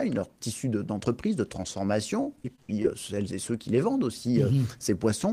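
From 2.23 to 2.86 s there's repeated packet loss, robotic and choppy: seven short dropouts, the longest 64 ms, each patched by stretching the previous sound.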